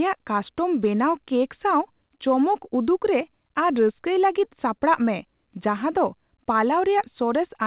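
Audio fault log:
No faults found; the speech has come over a call path whose narrowband coding, consistent with G.711 mu-law at 64 kbps, leaves nothing above 4 kHz.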